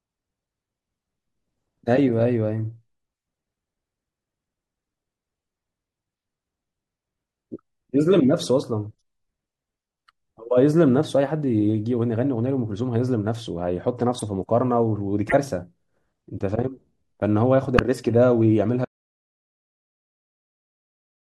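Corrupt frame decoded faults hit at 8.96–9.02 s, 14.19–14.22 s, 15.29–15.34 s, 16.35–16.41 s and 17.77–17.79 s. Damaged compressed frames were played anyway, throwing energy into the wrong frequencies. The result is short chirps and noise bursts, from faint to near full scale. Each appears as a brief vertical smear on the spectrogram.

An audio dropout to silence begins at 18.85 s and runs to the end. The input likely disconnected or muted while writing continued. The speech stops dead, with no room tone. The waveform goes to a flat line, and the spectrogram shows blank black.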